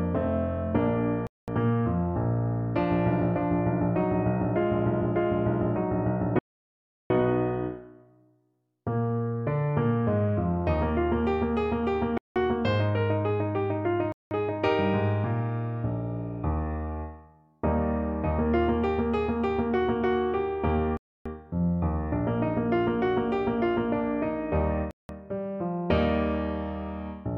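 The sound drops to dead silence six times and then resumes: at 1.27 s for 0.21 s, 6.39 s for 0.71 s, 12.18 s for 0.18 s, 14.12 s for 0.19 s, 20.97 s for 0.28 s, and 24.91 s for 0.18 s. These are likely Bluetooth stalls, where delayed wireless packets left the playback buffer empty until retransmissions arrived.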